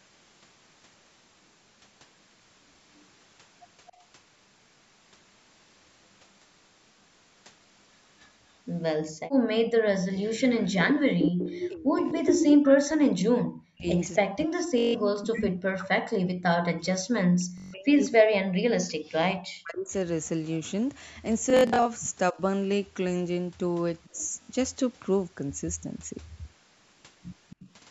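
From 2.97 to 3.89 s a faint delayed copy of the speech trails it by 269 ms, about 35 dB down. This is an echo leak, likely from a far-end loudspeaker whose echo canceller let part of its microphone pickup through. Unlike room reverberation, it is a distinct repeat at a fixed lag.

From 3.90 to 4.02 s the background is gated by the echo canceller. The room sound dips by about 11 dB for roughly a tenth of a second, leaving a hole in the ambience rather than in the speech.

From 8.23 to 15.27 s the echo leak returns at about the same level as the speech, still 269 ms behind. Within it, from 9.10 to 9.49 s, the background drops by about 36 dB for some 300 ms.

From 11.06 to 24.17 s speech is suppressed in double talk, likely because both sides spoke at once and the canceller turned everything down. The talker's voice falls by up to roughly 40 dB, about seven seconds in all. Unlike background gating, the voice itself is turned down.

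Bluetooth stutter occurs at 14.78 to 14.95 s, 17.58 to 17.74 s, 21.50 to 21.85 s and 24.43 to 24.51 s. The episode at 21.50 s is scattered, with its longest run about 64 ms. Each time a short slice repeats and the sound then jumps ahead, unlike a clean dropout into silence.

Faint echo leaks recur at 24.04 to 24.27 s and 27.50 to 27.71 s, about 30 and 25 dB below the speech.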